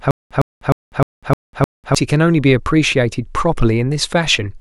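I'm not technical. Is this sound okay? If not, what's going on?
No. From the very start to 1.95 s there is a stutter with silent gaps: the same 0.11-second scrap of speech repeats six times, each followed by 0.2 seconds of dead silence. The likely cause is a stalled stream retrying. Unlike a simple dropout, the sound repeats instead of just vanishing.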